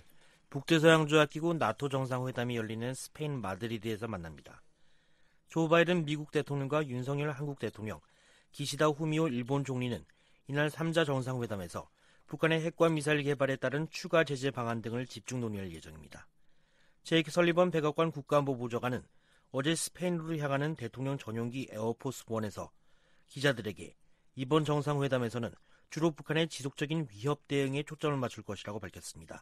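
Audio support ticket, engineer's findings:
No audio faults found.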